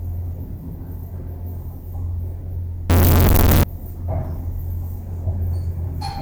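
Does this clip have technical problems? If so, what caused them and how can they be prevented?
Yes. From 2.90 s to 3.63 s the sound turns abruptly into a very loud, harsh, buzzy block in which quiet background material becomes as loud as the main sound. This is likely a float read as integer fault. The pattern points to 32-bit floating-point samples being read as 32-bit integers. The sign and exponent bits then dominate each value, so the waveform becomes nearly square at an almost fixed, high level. Keeping the declared sample format consistent with the actual data at every read and write stage prevents this.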